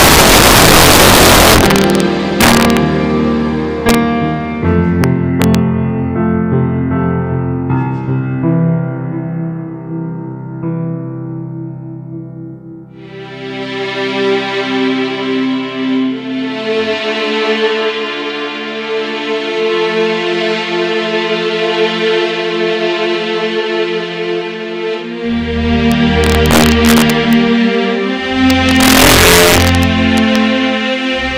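Integer overflow at 0.0–2.0 s, 2.41–2.77 s, 3.89–3.95 s, 5.04 s, 5.42–5.55 s, 25.9–27.3 s and 28.5–30.4 s. Peaks driven past the integer ceiling, by about 14 dB at the start, wrap to the opposite sign instead of being limited, so loud moments burst into violent cracks far sharper than clipping.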